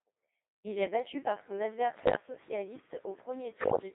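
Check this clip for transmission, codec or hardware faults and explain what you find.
Two faults show up: the whole clip runs through a Codec 2 vocoder, and it takes two bursts of bit errors on digital voice radio.

The Codec 2 vocoder at 2.4 kbit/s is on throughout, squeezed into a 300 Hz to 3.7 kHz band. Since it only sends pitch, voicing, level and a spectral envelope and rebuilds the speech from sine waves, the result sounds heavily robotic and buzzy.

The bit errors hit from 1.94 to 2.16 s, right after "est battu par son", and again from 3.58 to 3.80 s. Corrupted bits, roughly 5 and then 10 percent, scramble frame parameters, so the voice jumps in pitch and level and breaks into warbly gibberish.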